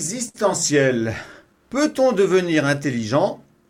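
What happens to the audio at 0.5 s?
At 0.5 s the sound falls inside a stretch of repeated timing corrections running from 0.15 to 3.48 s. The receiver keeps repeating short slices to wait for a lagging sender, so playback runs at about 98% speed, adding roughly a tenth of a second overall; the edits are heard, if at all, as slight hiccups or a slightly unsteady tempo.

Behind this is clock drift between sender and receiver, present throughout: the sender's clock runs about 5% slow, so the jitter buffer keeps draining and forces those small, unevenly spaced fill-in repeats.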